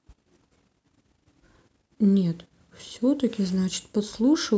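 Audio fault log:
No faults heard.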